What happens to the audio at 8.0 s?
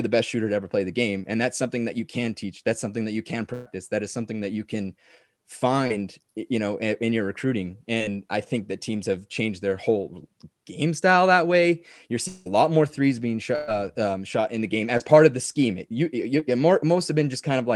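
A short concealed packet loss falls between 7.98 and 8.02 s. About 20 ms of the call audio never reached the decoder in time, and the receiver covered the hole by extending the preceding sound, with roughly 17 ms of synthesized fill, before blending back into the real signal. The result is a brief smear or wobble rather than silence. Unlike a hard dropout or a click, there is no gap or sharp edge, just a momentary blur.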